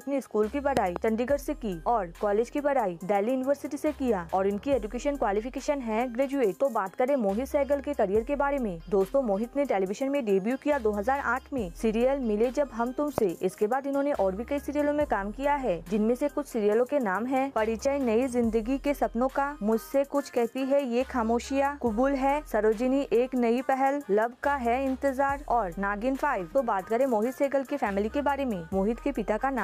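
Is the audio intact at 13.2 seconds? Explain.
No. A single loud pop sits at 13.18 to 13.20 s, a sharp click lasting about 20 ms that stands well above the surrounding sound, peaking around 20 dB over it, while the audio carries on underneath. It is likely a sudden voltage step or spike, such as from a switch, static or a driver glitch, shaped by the following circuitry. On a waveform it shows as a tall, narrow spike; on a spectrogram, a thin vertical stripe across all frequencies.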